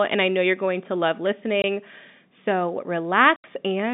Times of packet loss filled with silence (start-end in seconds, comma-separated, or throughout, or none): 1.62, 3.36-3.44